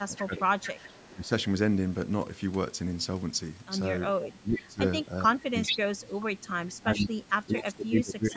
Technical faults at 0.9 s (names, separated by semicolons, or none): speech suppressed in double talk; echo leak